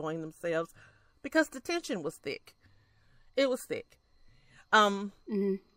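Listening to the speech recording, nothing stood out that would count as a technical fault.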